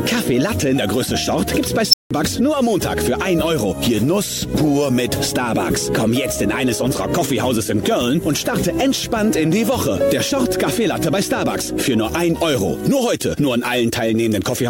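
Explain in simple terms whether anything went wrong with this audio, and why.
At 1.90 s an unstable filter blows up. A squeal near 5 kHz swells in 33 ms and then falls silent for 0.17 s, a silence that ordinary feedback howl lacks.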